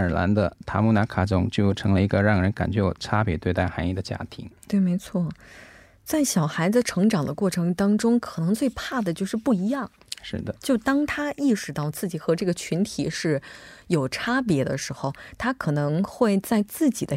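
No technical faults are audible.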